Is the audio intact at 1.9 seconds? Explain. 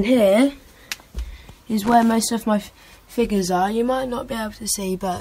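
No. From 1.83 to 2.03 s there is loose connector crackle: a worn contact intermittently breaks the signal, producing an irregular burst of scratchy crackle.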